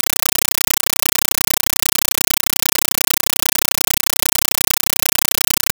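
From start to end, compressed stream played as audio. An undecoded AC-3 stream replaces the speech: loud static bursts lasting 8 ms, repeating 31.25 times a second.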